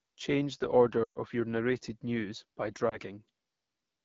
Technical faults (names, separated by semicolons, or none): AMR wideband (HD Voice) codec; lost AMR speech frames